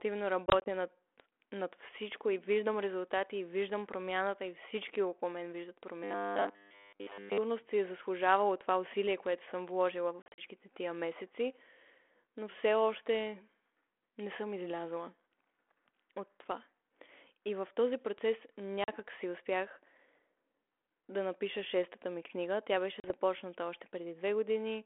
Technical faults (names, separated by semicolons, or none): packet loss on an ADPCM call; robotic sound from repeated short buffers